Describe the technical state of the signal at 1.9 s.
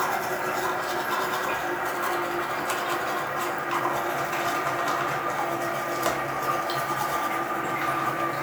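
At 1.9 s the signal is intact, with no audible technical fault at that moment.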